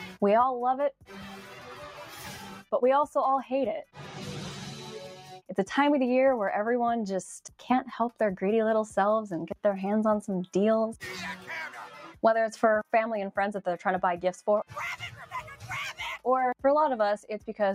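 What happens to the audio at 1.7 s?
At 1.7 s the audio is under a noise suppressor applied to music or sounds, as it is for the whole clip. The suppressor is tuned for speech. It treats sustained tones, ambience and reverb as noise and pulls them down. Onsets pass through, but held sound and decaying tails sink by roughly 5 dB. So the level pumps and flutters, and the sound thins out between attacks.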